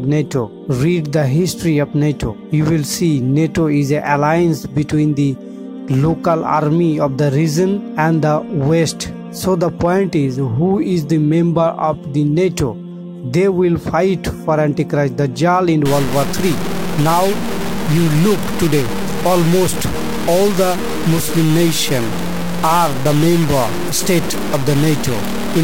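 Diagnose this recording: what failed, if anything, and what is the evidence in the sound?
From 15.86 s to the end at 25.64 s the sound turns coarse and grainy, with distortion that tracks the signal and sits only about 10 dB beneath it. This is likely low bit depth without dither, a sample-format conversion truncated to 4 bits.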